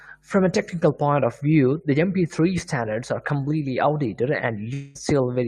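At 4.73 s the speech gives way to a smeared continuation of its last sound, a buzzy tone that thins out until normal audio resumes at 4.97 s, with about 0.22 s of material simply gone. This is most likely a long network dropout, where the receiver stretched the final sound to cover the missing stream. Unlike a brief packet-loss click or stutter, the fill runs for about 0.2 s.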